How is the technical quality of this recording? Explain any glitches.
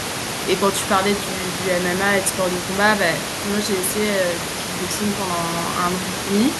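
No technical glitches are present.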